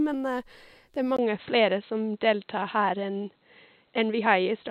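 At 1.17 s the speech drops out for a brief 20 ms gap, then returns dull and boxy, with nothing above 4.1 kHz, a small jump in level and a faint new noise floor. The likely cause is an input switched to a poorer device.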